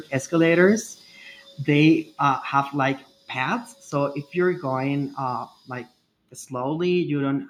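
Microphone volume stepped down at 1.02 s (about 3 dB) and 2.1 s (about 4 dB, before "uh have like paths"), likely the call software abruptly cutting input gain, dropping speech and background together.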